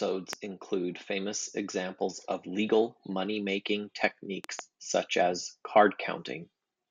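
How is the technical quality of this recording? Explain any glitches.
The recording has three loud pops. A single pop occurs at 0.33 to 0.35 s, and a pair follows in quick succession from 4.44 to 4.61 s. Each peaks about 15 dB above the speech, which carries on underneath. They are likely brief voltage pulses from a plug, switch, static discharge or driver glitch, which the downstream circuitry turns into sharp thumps.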